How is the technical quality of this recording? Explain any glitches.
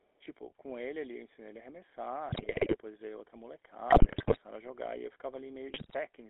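The recording is heavily compromised, with codec roughness throughout and three bursts of transmission damage.

The whole clip passed through the GSM full-rate codec at 13 kbps. Its pulse-driven vocal-tract model and 300 Hz to 3.6 kHz band make the speech buzzy, gravelly and muffled.

From 0.00 to 0.25 s there is an echo leak. A speakerphone's echo canceller likely failed to fully remove its own loudspeaker output, so a very faint copy returns about 0.39 s late.

GSM bit errors hit three stretches: 2.29 to 2.76 s, 3.90 to 4.38 s and 5.68 to 5.95 s. Corrupted filter, pitch and gain values, pointing to a few percent of bits flipped on a weak link, turn the speech into squawks, pops and gargling.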